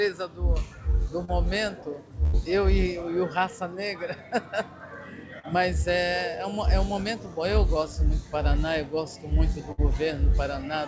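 At 1.25 to 1.31 s there's a short concealed packet loss: about 30 ms never arrived, so the receiver stretched the previous sound over the gap, leaving a quick smear. Then at 2.24 to 2.36 s comes a burst of packet loss, with about 90 ms gone, papered over by a fading continuation of the last sound before the audio jumps ahead. Another short concealed loss at 5.39 to 5.46 s smears about 30 ms the same way. A second burst at 9.72 to 9.81 s drops about 60 ms into a dying tail. The band tops out at 8 kHz, which fits a wideband call codec like G.722.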